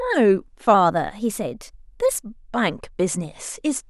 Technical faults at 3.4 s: none

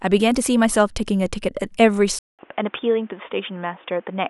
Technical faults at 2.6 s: input switched to a poorer device

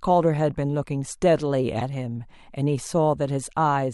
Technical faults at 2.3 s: none

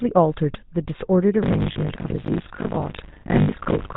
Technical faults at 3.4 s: GSM full-rate codec; buffer tearing; lost GSM frames

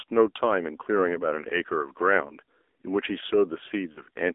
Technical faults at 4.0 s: AMR narrowband mobile codec; lost AMR speech frames

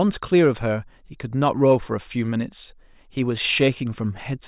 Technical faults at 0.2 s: none

